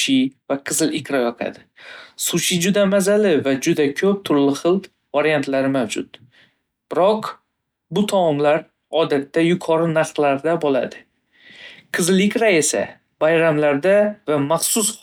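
No technical faults are audible in this speech.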